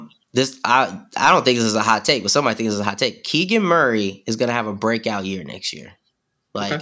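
Nothing in this speech recording stood out as a technical problem on listening.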